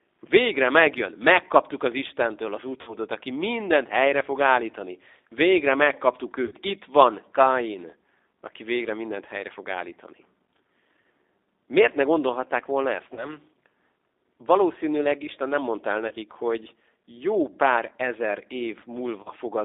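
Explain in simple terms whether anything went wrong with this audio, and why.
The speech has two problems.

The first is the G.729 codec, heard throughout. This phone-call compression rebuilds the voice from a simplified model, so it sounds rough and slightly synthetic, not just muffled. Only roughly 300 Hz to 3.7 kHz gets through, which makes it thin like a phone line.

The second is VoIP packet loss concealed by the speech codec, at 2.8 s (just before "aki mindent helyre fog"), 6.45 s, 13.1 s (after "ne gondolhatták volna ezt"), 16.08 s (between "nem mondta el" and "hogy jó pár ezer") and 19.2 s. Chunks of 60 ms (the first two) or 30 ms went missing. Instead of a silent gap, the decoder stretched the last bit of voice into a brief, fading smear of tone or noise, and the voice stays weak or distorted just afterwards.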